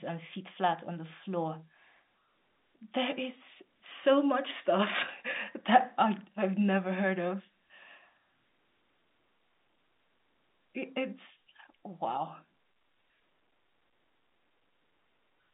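No technical fault can be heard anywhere in the speech. The sound carries the narrow band of G.711 telephone coding, roughly 250 Hz to 3.7 kHz, which fits an ordinary 64 kbps A-law line.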